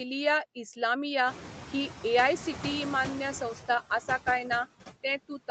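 Noise suppressor catching up, from 1.26 to 3.42 s: the background noise in this speech recording jumps by about 19 dB around one and a half seconds in. The suppressor's noise estimate lags behind that jump, so for roughly 2.2 s the louder noise passes with only about 5 dB of reduction. It sits about 14 dB under the speech and shrinks as the estimate adapts. Noise suppressor artifacts run through the whole clip. The suppressor pulls down the bands it treats as steady noise by about 11 dB, frame by frame, so the noise dips between words and swells beneath them. Nothing reaches above 8 kHz, consistent with a wideband call codec on the call path.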